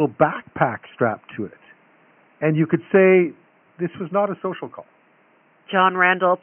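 Nothing's technically wrong with this bit of speech; the only thing underneath it is the room's own background, sitting about 39 dB below the talking, which is just part of the recording.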